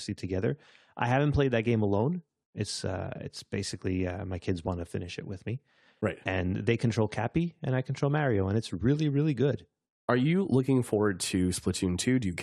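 Nothing in the speech stood out as a technical fault on listening.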